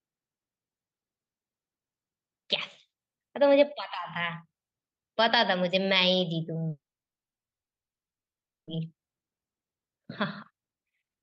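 From 6.69 to 8.69 s a call audio freeze leaves a 2-second gap, almost entirely silent after a brief fade, likely from delayed packets. The speech then resumes where it stopped, with nothing lost, unlike a dropout.

Jitter buffer speed-up follows at 8.79 to 10.04 s (113% speed, about a fifth of a second trimmed) and at 10.52 to 11.20 s (171%, roughly half a second). The speech sounds hurried but keeps its pitch, unlike a resampling error.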